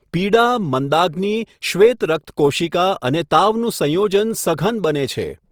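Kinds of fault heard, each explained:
Opus compression: speech sounds grainy and rough throughout, fitting likely Opus music-mode coding near 24 kbps. The spectrogram shows noise-filled bands with few holes and nothing above 20.4 kHz.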